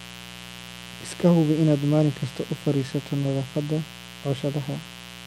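A mains buzz runs under this speech from start to finish: switching spikes locked to the 60 Hz supply, twice per cycle, have leaked into the signal path, spraying harmonics up into the kilohertz range and adding a steady, raspy drone roughly 20 dB below the speech.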